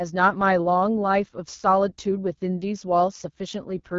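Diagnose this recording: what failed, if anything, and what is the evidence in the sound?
The codec stage failed: the speech carries AMR wideband (HD Voice) coding damage throughout, plainly audible as a rough, raspy texture. The encoder models speech up to 6.4 kHz, noise-fills the top band, and at this low rate, likely near 8.85 kbit/s, starves the excitation pulses. A spectrogram shows nothing above about 7.3 kHz and smeared, grainy harmonics.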